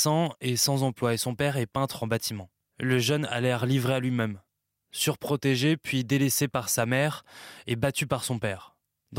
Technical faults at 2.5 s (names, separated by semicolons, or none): none